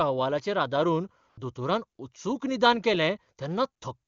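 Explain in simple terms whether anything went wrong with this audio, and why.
Between 1.29 and 1.37 s there is AMR comfort noise. The phone briefly judged the sound silent and stopped sending it. The receiver filled that 80 ms gap with smooth, artificial hiss.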